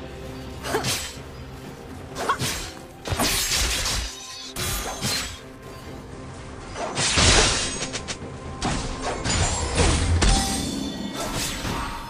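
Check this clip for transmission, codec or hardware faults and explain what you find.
One fault: digital radio blending to analogue. From 5.98 to 10.53 s the receiver loses digital and cross-fades in 171 ms to FM. Faint hiss rises, the spectrogram cuts off above about 15 kHz, and the waveform level steps about 2 dB.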